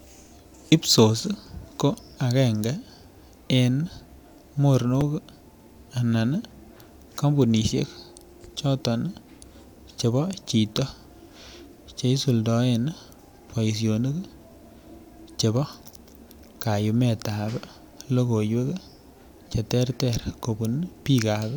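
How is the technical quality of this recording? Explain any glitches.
Two brief playback glitches stand out in the speech, both of the same kind.

Both are repeated buffers. At 5.01 s, fresh audio arrived late, so the device replayed its last 5.8 ms chunk (which fits a 256-sample buffer) once, giving a tiny click. At 19.49 to 19.51 s it looped its last chunk four extra times, making a short buzz and dropping around 20 ms.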